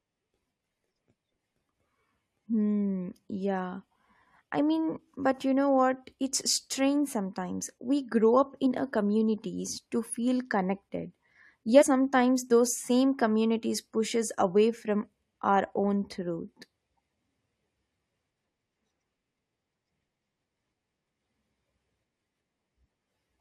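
At 8.65 s, after "grow up", and at 11.81 to 11.83 s, compressed frames are skipped. Roughly one, then about five frames vanish. The speech jumps ahead by about 20 ms, then about 100 ms.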